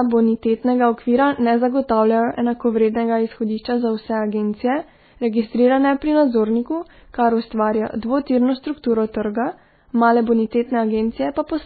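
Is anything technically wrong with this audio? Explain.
Yes. Throughout, the speech sounds watery and swirly, with a hard ceiling at 4.5 kHz and smeared consonant onsets. This is likely heavy MP3 compression, which fits a bitrate near 16 kbps. Short of bits, the encoder cuts the treble and zeroes weak frequency lines, which flicker between frames.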